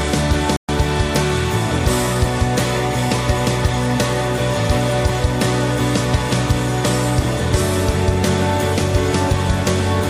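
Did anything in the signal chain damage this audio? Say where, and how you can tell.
Yes: a playback stall at the playback stage. The sound cuts to silence at 0.56 s and resumes at 0.69 s, a gap of about 123 ms. The likely cause is the player running short of data or its output thread being briefly blocked. Unlike network packet loss, the silence is clean and continuous, with no concealment smearing.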